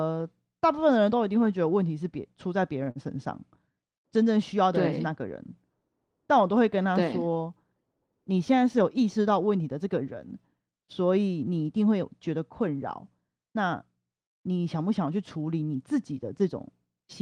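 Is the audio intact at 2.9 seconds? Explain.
No. From 2.83 to 2.90 s there is a short stall from a late packet: the jitter buffer ran dry and the last sound was stretched about 36 ms, so a held, slightly buzzy sound appears. It shows as repeated, smeared harmonics in the spectrogram. From 2.91 to 2.98 s, short concealed packet loss replaced about 40 ms of speech with an extrapolated continuation, heard as a brief smear or wobble. This appears as a blurred patch.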